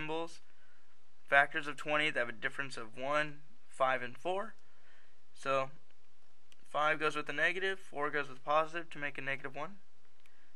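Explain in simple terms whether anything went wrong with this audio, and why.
Something in the recording chain shifted the whole signal off its centre line for the entire clip. This DC offset can't be heard, but it wastes loudness headroom.

A background task also briefly stalled the USB connection or audio driver every 2 seconds, from about 0.96 to 6.94 s. These periodic USB or driver dropouts skipped roughly half a millisecond each time, heard as regular ticks.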